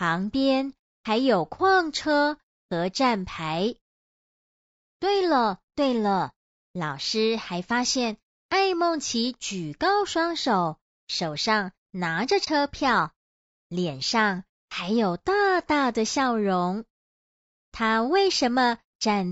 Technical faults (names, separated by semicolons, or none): low-delay AAC compression; AAC frame loss with muting